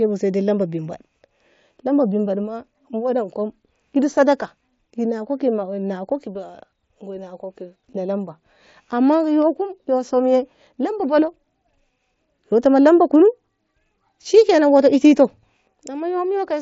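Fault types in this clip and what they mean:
No faults are present; the speech passes intact over a Bluetooth mSBC headset link, with the wideband limit of that codec audible as a top end that stops near 8 kHz.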